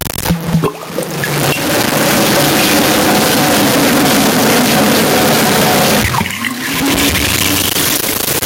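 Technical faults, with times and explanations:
Throughout, low bit depth without dither: gritty, signal-following distortion, likely from truncation to about 6 bits; the waveform shows coarse stair-steps, and the spectrogram shows broadband hash that tracks the sound.
Throughout, gain pumping: gain likely pulled down roughly 15 dB under loud sounds; the waveform envelope looks flattened.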